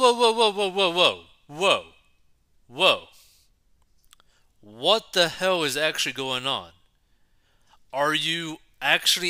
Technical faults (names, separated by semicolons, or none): none